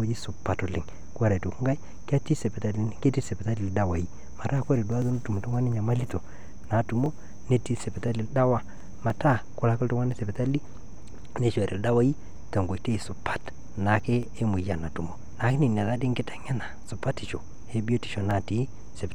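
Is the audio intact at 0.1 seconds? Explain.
Yes, at 0.1 s the audio is intact, with no dropout, click, distortion or other fault at that point.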